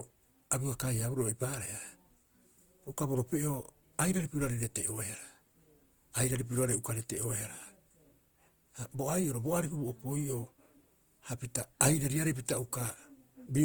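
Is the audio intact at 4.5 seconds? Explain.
No. A phantom power thump runs from 4.44 to 4.67 s. A supply switched on or off on a live input sends a voltage step through the coupling capacitors. It sounds like a deep thump that dies away in about 50 ms.

Grainy, rough coding damage is also plainly audible there and throughout, with the full bandwidth kept. This is likely Opus compression in its music (CELT) mode. Bands starved of bits are filled with folded or noise content, which fits a rate around 24 kbps.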